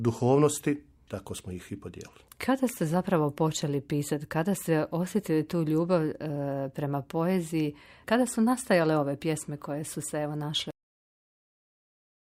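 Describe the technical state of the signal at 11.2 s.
At 11.2 s there is no signal at all. The moment falls inside a cut-off end that begins at 10.71 s and runs to the end of the clip, about 1.5 s of dead air. The final buffers of audio were never written or played out. The sound is halted mid-event at 10.71 s. It does not fade or decay. It drops straight to digital silence, and that silence continues through 11.2 s to the end.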